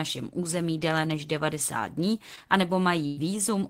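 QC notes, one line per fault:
2.35–2.39 s, short concealed packet loss: about 20 ms of speech never arrived, and the receiver stretched the preceding sound over it, so there's a quick smear.
3.07–3.19 s, burst of packet loss: roughly 100 ms went missing in a row, patched by carrying the last sound on and fading it, then speech jumps ahead.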